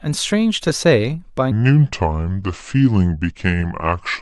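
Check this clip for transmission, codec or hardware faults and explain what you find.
One fault stands out. Wrong sample rate, from 1.51 s to the end: the speech is played back slower than it was captured, with no conversion, which fits 44.1 kHz material clocked out at 32 kHz. Speed drops to 0.73 times normal and pitch falls about 5.5 semitones, so the voice turns low, dragging and heavy.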